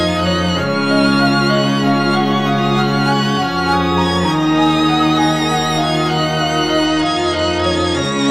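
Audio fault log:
6.86–8.31 s, Bluetooth SBC bit pool drop: the music abruptly loses its top end and takes on a gritty, grainy texture that persists to the end of the clip. This is the sound of the phone cutting the SBC bit pool on a congested link, which fits a fall from about 28 to 12, near 96 kbps. With so few bits, the highest sub-bands receive little or nothing, so the treble dulls, and the remaining bands are coarsely quantised into audible noise.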